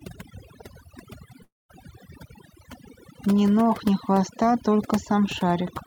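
Overdone noise removal runs through the whole clip: bands near the noise estimate get gated out, so the background drops and breaks up into twinkly specks. From 1.43 to 1.71 s the sound trails off into a fading buzz or hiss, then about 0.2 s of silence, and resumes with a chunk missing, likely a long network dropout.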